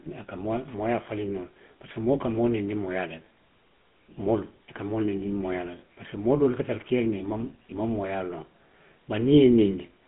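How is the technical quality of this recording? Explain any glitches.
Quality's pretty rough: the whole clip has been through a GSM full-rate codec. The excitation is a coarse pulse train, giving that buzzy, gravelly edge, and everything above 3.8 kHz is gone. It fits a 13 kbps phone line.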